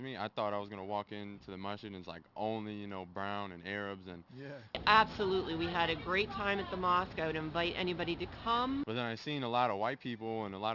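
From the start to the end the audio carries aliasing. The material was brought down from 44.1 kHz to 12 kHz with no anti-alias filter, so everything above the 6 kHz fold point mirrors back into the audible band at unrelated frequencies. The folded energy sits somewhat quietly under the real signal, yet it gives sibilants and bright content a gritty, metallic edge. On a spectrogram, energy runs hard right up to 6 kHz, with mirrored traces crossing the true ones.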